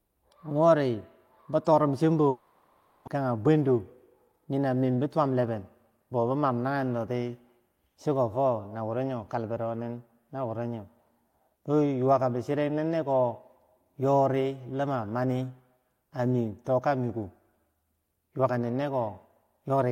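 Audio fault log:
2.29–3.09 s, long network dropout: the sound smears into a fading, buzzy continuation that fills nearly all of the gap with no true silence. When it resumes, about 0.6 s of audio is simply gone. This is likely packets failing to arrive while the receiver extended the last sound.
4.97–6.45 s, jitter buffer speed-up: the speech sounds hurried, running about 10% fast while its pitch stays unchanged. The receiver had built up extra buffered audio and repeatedly cut out short pitch-period slices, removing roughly 150 ms to bring the delay back down.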